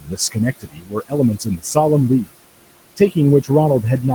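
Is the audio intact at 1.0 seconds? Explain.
No. At 1.0 s the sound sits inside a stretch of speech cut by the noise suppressor, running from 0.60 to 1.13 s, with roughly 400 ms of it affected. The suppressor misread parts of the speech as steady noise and pulled those bands down with the background, by about 19 dB at the deepest point, so the syllables there sound swallowed and faint. This is not a dropout: the sound never goes fully silent or clicks off. What remains fades and thins, following the suppressor's gain.

The same moment also carries noise suppressor artifacts, which run through the whole clip. Working frame by frame, the suppressor lowers the bands it judges to be noise by about 21 dB, so the room noise, which sits about 15 dB below the speech, rises and dips as the speech starts and stops. Unlike the cut, this texture colours the background everywhere rather than removing parts of the speech.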